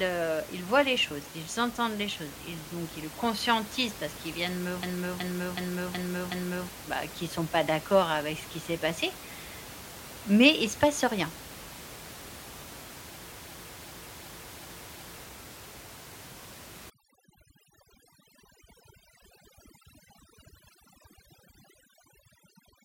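A system hang loop strikes from 4.83 to 6.69 s, after "parce qu'ils viennent me" and before "bah qu'ils sont pas", and again from 13.38 to 15.23 s. Each time the machine froze while the audio hardware kept replaying one 0.37 s slice, which fits a 16384-sample buffer. That slice repeats five times at 2.69 Hz, a machine-gun stutter that replaces about two seconds of speech.

Overdone noise removal runs from 16.90 s to the end at 22.85 s. Against room noise sitting about 16 dB below the speech, the reduction was set too hard. Bands near the noise estimate are gated out along with quiet parts of the voice, leaving the background broken up into twinkling specks.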